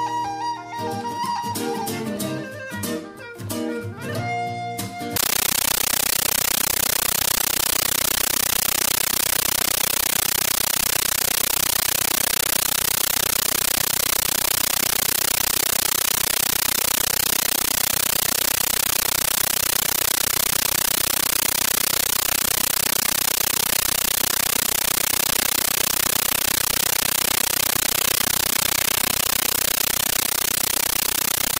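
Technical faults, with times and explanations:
5.16–31.6 s, compressed stream played as audio: from 5.16 s to the end, the sound gives way to harsh, very loud chattering static. The receiving end treated an encoded Dolby Digital (AC-3) bitstream as ordinary samples instead of decoding it, which fits a 640 kbps AC-3 stream. Each coded frame plays as a 13.3 ms burst of noise followed by silent zero padding, repeating 31.25 times a second, and that regular burst-and-gap cycle produces the rattling texture.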